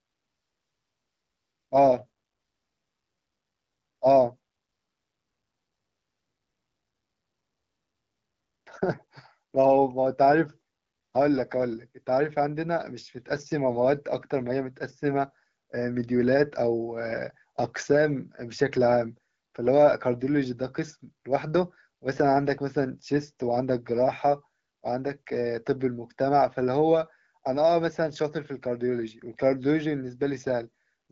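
Speech carried over AMR wideband (HD Voice) at 12.65 kbit/s, showing only the light coding character expected at that rate, with no technical faults to report.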